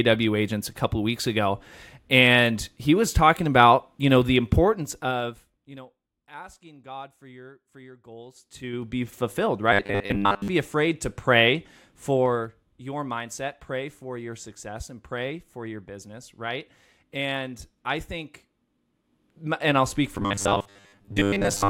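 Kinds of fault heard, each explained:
Zipper noise: at 4.64–5.94 s after "about you know the", 8.27–9.01 s and 12.07–12.73 s, the level moves in unsmoothed steps of 2, 3 and 1 dB, around ten a second. Each step clicks, giving a ticking across drops of roughly 25 and 10 dB and a rise of roughly 25 dB.
Robotic sound from repeated short buffers: at 9.73–10.48 s, just before "afraid to pray", and from 20.15 s after "and I'll speak" to the end, a rigid 100 Hz buzz is heard. This is likely from repeating a 10 ms stretch for roughly seven tenths of the time, skipping the real audio.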